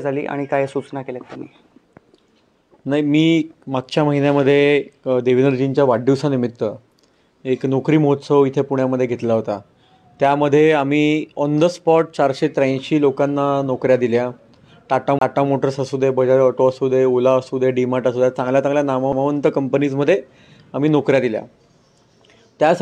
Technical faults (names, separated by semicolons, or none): CD skip